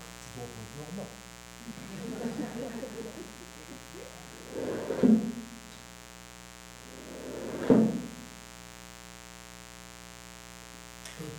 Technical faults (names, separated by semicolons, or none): mains buzz